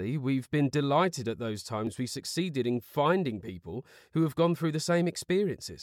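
At 1.87 s the audio jumps ahead at a likely dropped buffer (overrun): about 5 ms was lost uncollected, showing as a waveform step and vertical spectrogram line.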